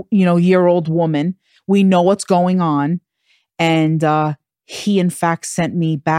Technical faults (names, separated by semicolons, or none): none